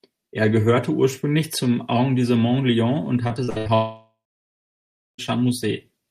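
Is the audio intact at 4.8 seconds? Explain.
No. A likely long network dropout stopped audio arriving from 3.74 to 5.20 s; the last sound fades as a buzz or hiss, then silence.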